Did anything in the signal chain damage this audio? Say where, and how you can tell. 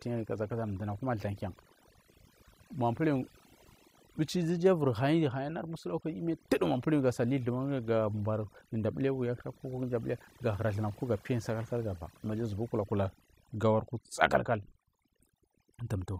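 Yes. Overdone noise removal in the processing stage: a suppressor set far too strong gates individual frequency bands near its noise estimate throughout the speech. The background drops and breaks up into twinkling specks, while quieter speech detail vanishes.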